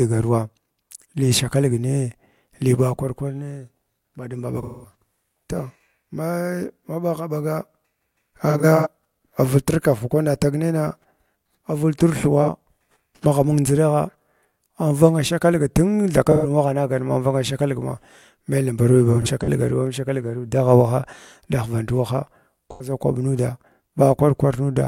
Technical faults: AAC frame loss with concealment

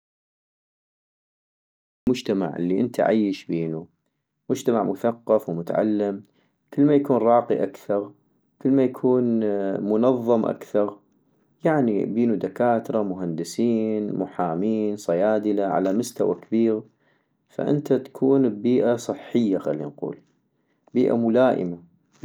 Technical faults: audio dropout to silence

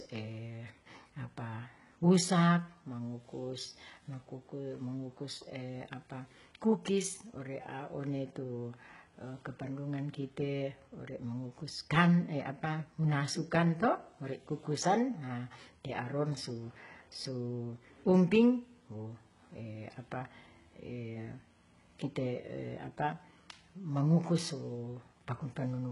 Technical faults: HE-AAC compression

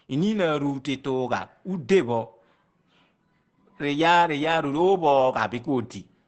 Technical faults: Opus compression

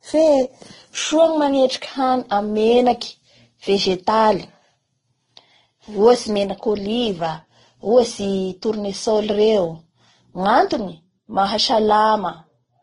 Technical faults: transcoding between lossy codecs

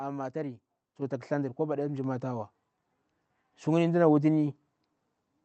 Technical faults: microphone volume stepped up

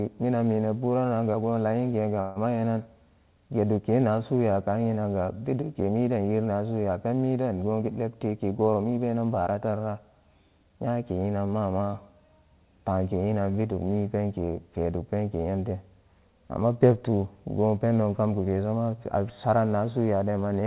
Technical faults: call audio freeze; jitter buffer speed-up

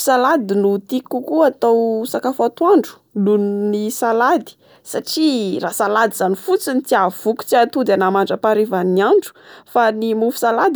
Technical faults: none

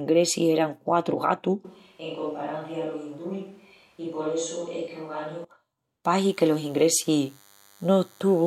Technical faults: switch to a distant microphone; DECT cordless phone buzz

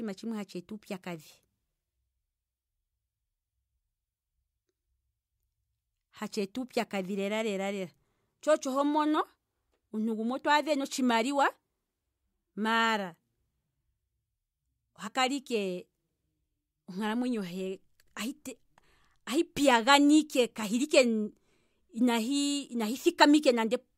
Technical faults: compressed frames skipped

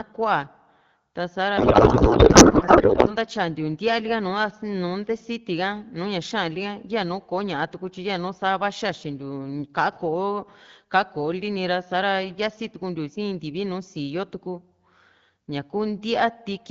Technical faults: codec payload misread

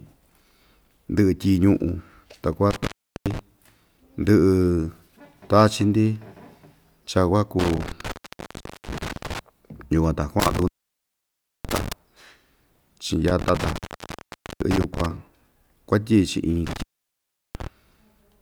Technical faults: intermittent contact

